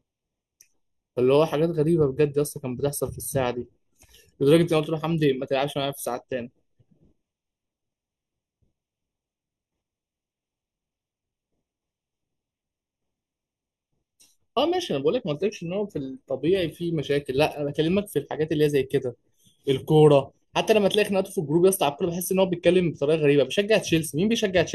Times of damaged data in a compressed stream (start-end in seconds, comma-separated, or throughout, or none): none